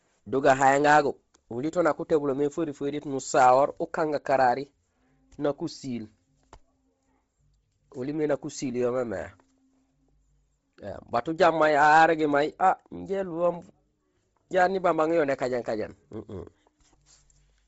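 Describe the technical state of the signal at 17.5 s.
At 17.5 s the speech is still passing through what is likely Bluetooth LC3 compression, which runs for the whole clip. The transform codec is starved of bits, and the heavy damage fits roughly 24 kbps with 7.5 ms frames. With too few bits, it discards much of the upper spectrum and substitutes synthetic noise. Nothing remains above 7.7 kHz, and the voice carries a breathy, grainy edge with a dulled top end.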